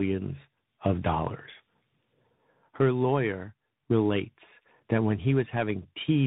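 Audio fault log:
Throughout, tandem speech coding: the speech has passed through two speech coders in a row, most likely a low-rate narrowband coder such as AMR-NB followed by a CVSD link, with G.711-style telephone coding between them. Each coder reworks the previous one's already degraded output, so their errors stack. The result is rougher, more muffled and more warbly than either link alone, with nothing above 3.8 kHz.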